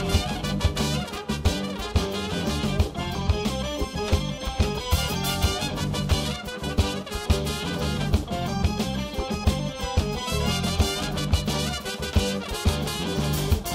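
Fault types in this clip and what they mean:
No fault types can be heard in this clip.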